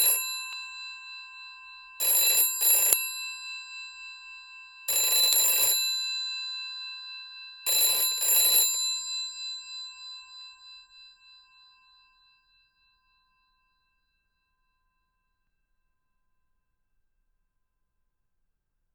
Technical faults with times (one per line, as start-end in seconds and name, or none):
0.53 damaged data in a compressed stream
2.93 damaged data in a compressed stream
5.33 damaged data in a compressed stream
7.66 damaged data in a compressed stream
15.47 damaged data in a compressed stream